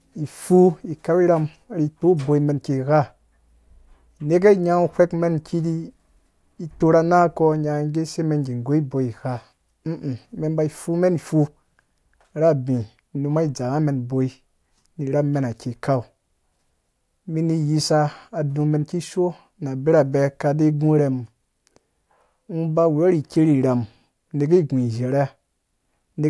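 Speech recording, and nothing technically wrong can be heard in it at any point.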